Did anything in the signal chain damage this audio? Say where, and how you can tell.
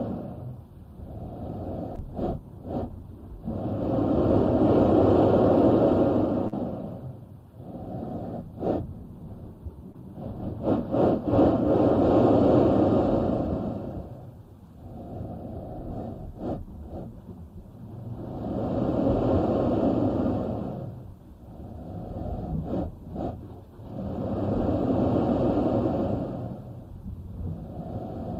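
Yes, at the network stage. Short concealed packet loss appears at 1.95–2.08 s, 6.48–6.54 s and 9.92–9.96 s. Each is a brief smear or wobble. Roughly 20, 40 and 20 ms arrived too late, so the receiver extended the preceding sound, then blended back.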